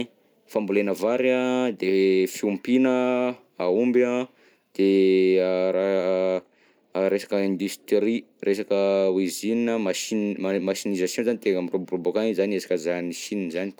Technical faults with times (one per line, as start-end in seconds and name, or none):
none